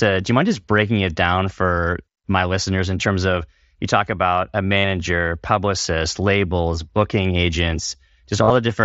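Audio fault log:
4.77–4.84 s and 8.44–8.50 s: concealed Bluetooth headset packet loss. About 67.5 ms, then 52.5 ms spread over 60 ms, went missing. The receiver loops a matching slice of recent waveform to fill them. Each gap becomes a brief buzzy held tone, warbling as sound resumes.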